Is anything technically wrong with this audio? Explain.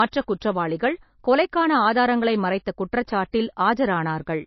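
Yes. Throughout, the speech sounds dull and smeared, with nothing above 5.8 kHz, likely low-bitrate audio saved at a high bitrate: an MP3 near 28 kbit/s re-encoded at 320 kbit/s that cannot restore what was lost.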